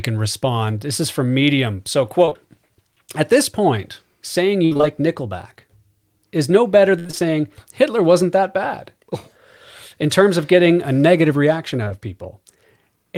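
Speech, marred by two kinds of network dropout. Short concealed packet loss hits at 2.25 to 2.37 s and again at 11.84 to 11.92 s, just after "getting a negative reaction". Back-to-back 20 ms holes, which points to 20 ms packets, were filled by extending the preceding sound, giving a brief smeared wobble. On a spectrogram the harmonics run unnaturally flat and smooth across those spans. Repeated packet loss (robotic sound) occurs at 4.65 to 4.85 s after "at this point saying", with four gaps up to 62 ms that leave about 60% of the span synthesized, and at 6.99 to 7.22 s after "is no better", with five gaps up to 59 ms covering about 57%. Concealment was rebuilt again and again, so the sound turns choppy. The waveform shows stuttering, repeated cycles, and the spectrogram shows blocky, frozen harmonic stripes broken by seams.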